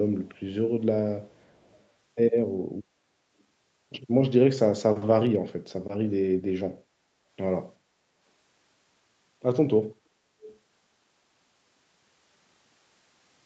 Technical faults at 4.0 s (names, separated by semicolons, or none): none